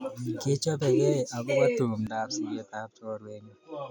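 Speech, and from 2.07 s to the end the sound turns duller and drops about 5 dB in level, with nothing above 7.1 kHz and a faint new noise floor. The change comes with no gap, which likely means the input switched to a poorer device.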